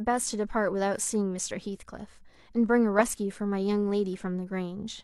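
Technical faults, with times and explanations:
No technical faults can be heard in the speech. Nothing in it calls for a time or an explanation.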